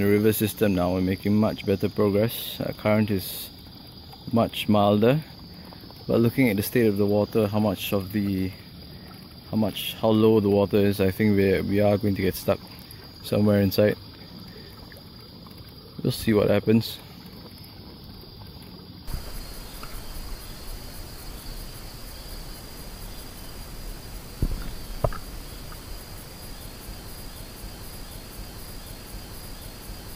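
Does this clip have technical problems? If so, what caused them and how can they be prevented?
Yes. From 27.15 s to the end of the clip, a broken-record loop takes over. The player, encoder or stream likely stalled and kept resending the last block of audio it held instead of moving on. As a result, a 0.75 s fragment repeats exactly, back to back, four times. Whatever should have played in those final three seconds never arrives. To prevent this, use a watchdog that detects a stalled buffer and outputs silence or reconnects rather than replaying stale data.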